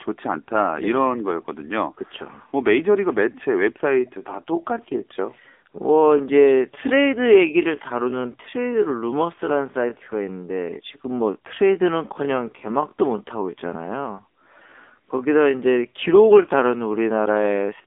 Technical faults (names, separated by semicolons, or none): AMR narrowband mobile codec